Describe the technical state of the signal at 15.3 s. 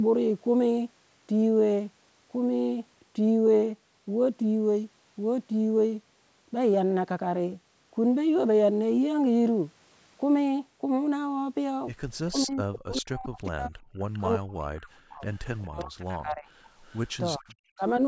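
At 15.3 s an echo leak is present, running from 15.21 to 15.85 s. A faint copy of the sound returns about 403 ms late and sits about 30 dB below the direct speech. This is likely residual loudspeaker pickup that the far end's echo canceller failed to remove.

This overlaps the tail of speech suppressed in double talk, which spans 14.21 to 15.25 s. During that span the talker dips by up to about 40 dB for roughly one second, likely because the canceller turns down its own talker along with the loudspeaker echo.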